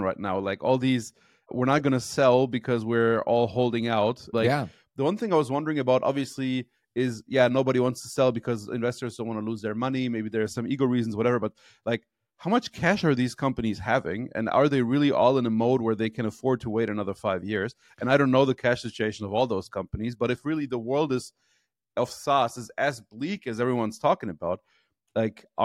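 No technical faults detected.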